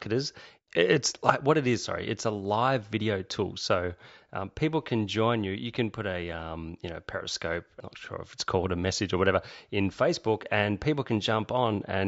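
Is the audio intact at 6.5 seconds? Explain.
Yes, the speech at 6.5 seconds comes through intact, with no dropout, distortion, glitch or other fault audible at that moment.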